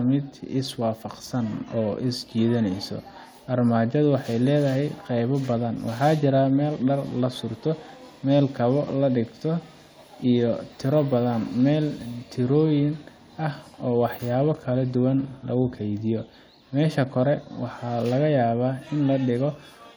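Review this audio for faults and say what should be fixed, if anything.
No faults turn up in this audio, so nothing needs to be fixed.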